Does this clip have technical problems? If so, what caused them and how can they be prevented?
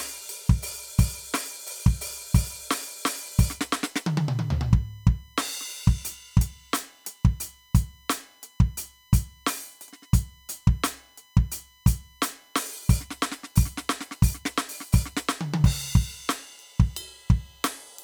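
Yes. USB whine runs from 3.13 s to the end, a steady tone at 1 kHz that is strongest at its third harmonic, 3 kHz, roughly 35 dB below the music. The USB bus's 1 ms frame timing is leaking into the audio through shared power or ground. Prevent it with a powered, isolated hub or USB isolator, or by keeping the audio interface off the computer's bus power.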